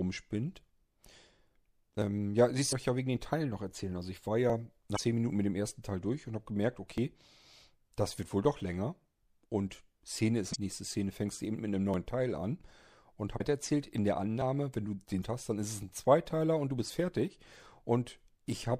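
Audio missing between chunks occurs at 2.02, 4.50, 6.98 and 11.94 s. The sound skips forward by around 20 ms at each point, and the two sides are butted together with no silence between them. The skips fall on a 2.5 s grid, which likely points to a recorder or processor working in 2.5 s chunks and dropping a short piece each time it closes one block and opens the next.

Damaged data in a compressed stream appears from 2.69 to 2.73 s, 4.94 to 4.98 s, 10.52 to 10.56 s, 13.37 to 13.41 s and 15.20 to 15.25 s, each lasting roughly 40 to 50 ms. In these spots the encoded frames were corrupted, lost or overwritten. The decoder misreads or rejects them, loses sync, and hunts for the next valid frame header, producing a brief disturbance heard as a chirp, squawk, click or short hole.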